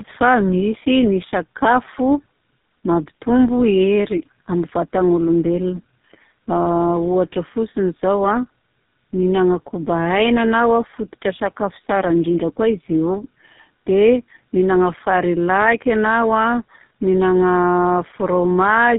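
From start to finish the speech carries tandem speech coding: it has passed through two low-rate speech codecs in series, with a plain telephone-band link between them, and the roughness fits a low-rate AMR-NB stage followed by GSM full rate. The second coder models an already distorted signal, so the errors stack. The voice sounds gritty, muffled and warbling, with nothing above 3.8 kHz, and is duller and rougher than a single mobile hop would leave it.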